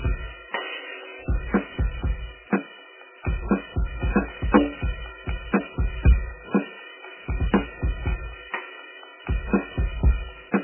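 Music, throughout which a likely MP3 encode at a very low bitrate, around 8 kbps, has removed everything above 3.1 kHz, leaving the sound dull, watery and swirling.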